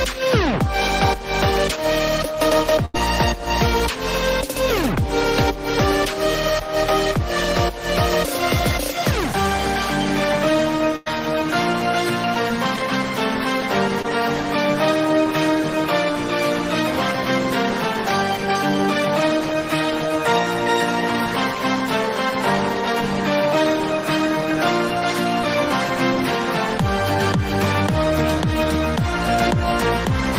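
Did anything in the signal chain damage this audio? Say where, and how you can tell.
Yes. Two bursts of packet loss on the network leg, at 2.85 to 2.96 s and 10.96 to 11.08 s. The receiver extended the last sound for about 85 and 100 ms, fading it out, then resumed further on with roughly 80 and 100 ms of audio gone.

There is also a short concealed packet loss at 14.02 to 14.06 s, again a network fault. About 20 ms arrived too late, and the decoder bridged it with around 23 ms of continued sound before blending back, leaving a brief smear in the audio.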